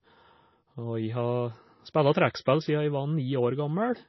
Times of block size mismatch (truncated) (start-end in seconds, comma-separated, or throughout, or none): 1.19-2.01